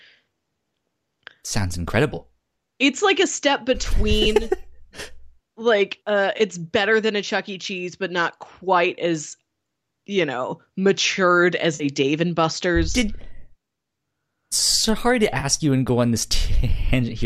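Four short AAC frame losses with concealment occur. At 4.25 s, about 10 ms goes missing and leaves a smear. Between "like uh" and "better than a", 6.38 to 6.41 s, a 20 ms patch sounds noisy and phasey. After "you know matured", 11.75 to 11.84 s, a 50 ms gap smears. Between "sorry to" and "you and go on", 15.40 to 15.45 s, 30 ms blurs. Each time the decoder rebuilt lost frames from the last good spectrum. The 10 ms steps fit the short frames of the likely low-delay AAC stream.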